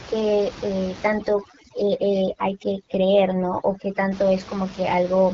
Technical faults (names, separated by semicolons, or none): AMR wideband (HD Voice) codec; overdone noise removal